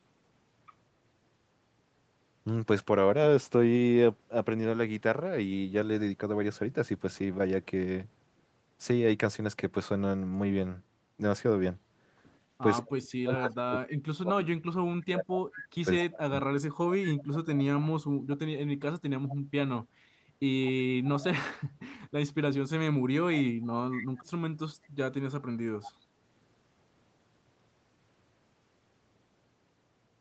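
From 12.82 s to 18.5 s the voice repeatedly dips, thins out and breaks into fragments, about four seconds of it in total, with the deepest drops falling roughly 40 dB. This is speech suppressed in double talk. With both sides talking at once, the echo canceller likely could not tell the near talker apart from the loudspeaker echo, so it turned everything down together and took the wanted speech with it.

Inside that stretch a faint, delayed copy of the voice first surfaces from 13.36 to 13.42 s and again from 15.53 to 16.05 s. It returns at 19.29 to 19.36 s, 23.91 to 24.24 s and 25.84 to 25.91 s, always trailing by 202 ms and sitting about 15 to 20 dB below the direct speech, as short scraps. This is echo leak. On one side the call was likely playing on a loudspeaker, and that side's echo canceller did not fully remove what its microphone picked up, so the residue came back down the line.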